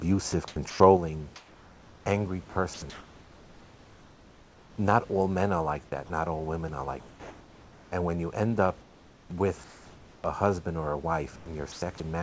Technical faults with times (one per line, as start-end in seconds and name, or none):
0.48-0.80 sound chopped by the voice detector
0.97-12.22 one channel drops out
1.36-4.78 sound chopped by the voice detector
6.06-6.10 sound dropped by the voice detector
7.00-7.92 comfort noise in place of the background
8.82-10.24 comfort noise in place of the background
11.36-12.00 sound chopped by the voice detector